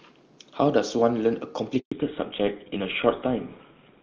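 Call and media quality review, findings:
Handover gap, 1.80 to 1.92 s: speech dies away quickly, then 120 ms of silence. Network switch mid-call; no speech frames delivered until the new link came up. Audio in that window is lost.

Fallback to narrowband from 1.92 s to end: content above 4 kHz gone, speech duller and rougher. Codec dropped from HD Voice (clean earlier band, consistent with top-rate AMR-WB) to a legacy narrowband codec, likely GSM full rate.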